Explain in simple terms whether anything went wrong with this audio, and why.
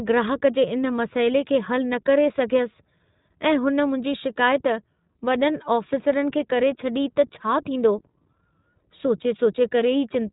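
iLBC codec compression affects the speech from start to finish. This phone-style codec chops the sound into short slices, each rebuilt independently, which fits 20 ms frames. Everything above about 3.8 kHz is discarded, so the speech sounds narrow and muffled, like a telephone call. Because each slice is rebuilt from a rough description, the damage is plainly audible as a slightly rough, synthetic edge on the speech.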